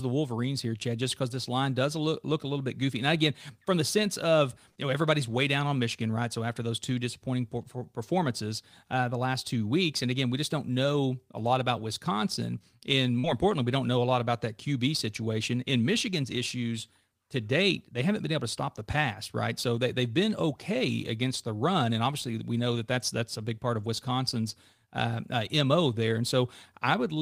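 Short concealed packet loss occurs at 4.71 to 4.77 s, between "from the sense of" and "you know everybody's way", and again at 13.19 to 13.25 s, just before "importantly we don't know". Each time about 40 ms of speech failed to arrive, and the receiver papered over the gap by extending the preceding sound for roughly 40 ms before blending back into the real audio. It comes across as a brief smear or wobble in the speech.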